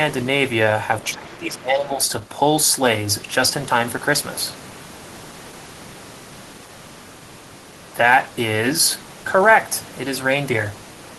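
Right at 1.04 to 1.14 s there's a faint scrap of the other side's voice leaking through, sitting about 25 dB under the speech. It's likely a loudspeaker echo the canceller didn't fully scrub out, and it comes back briefly at 1.53 to 1.57 s and 2.05 to 2.09 s, quieter each time. From 1.14 to 1.99 s the talker gets pulled down, dipping by up to about 20 dB for most of that stretch. That's speech suppressed in double talk, likely the canceller turning both voices down while they overlap.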